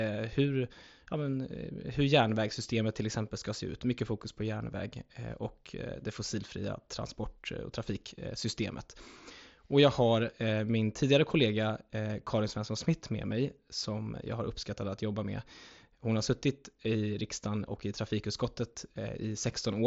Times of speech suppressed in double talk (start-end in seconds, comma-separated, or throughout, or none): none